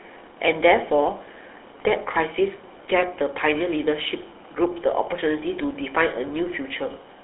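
Throughout the speech, the GSM full-rate codec adds a buzzy, gravelly roughness. The voice is rebuilt from a vocal-tract model driven by sparse, regular pulses, which fits a 13 kbps coder. Plain band-limiting to 300 Hz–3.7 kHz only muffles. This grain sits inside the band.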